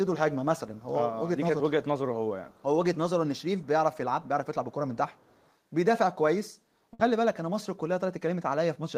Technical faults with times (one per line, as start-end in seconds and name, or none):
0.74-0.84 echo leak
2.49-2.63 echo leak
3.36-3.67 echo leak
4.94-5.54 echo leak
6.93-7.01 burst of packet loss